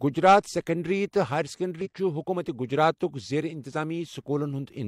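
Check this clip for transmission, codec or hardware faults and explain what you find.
One fault is present. At 1.81 to 1.87 s, just after "گجرات سکنڑری تہٕ ہایر", damaged data in a compressed stream corrupts the frames there; the decoder misreads them and resynchronises on the next header, producing a brief glitch in the speech.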